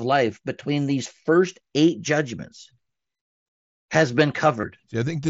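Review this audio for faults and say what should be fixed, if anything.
A brief buzzy, held tone with a slight warble as normal speech resumes at 4.61 to 4.63 s comes from concealed Bluetooth headset packet loss, fitting about three lost 7.5 ms mSBC frames repeated from recent waveform. Keep the headset close to the phone and clear of 2.4 GHz interference to prevent it.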